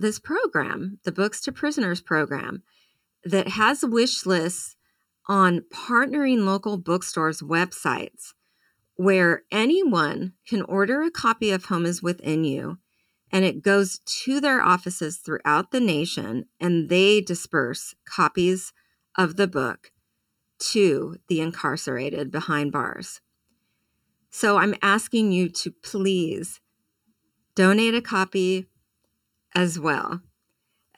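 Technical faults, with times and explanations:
Throughout: channel delay (comb filtering). One channel of the speech arrives about 0.7 ms late, and when the two are summed to mono the shared content cancels at evenly spaced frequencies, the first near 700 Hz and further notches roughly every 1.4 kHz above it. The result is a hollow, boxy tone. Unlike flanging, the notches stay fixed for the whole clip. Unlike a polarity flip, the low end survives while notches repeat up through the mids and highs.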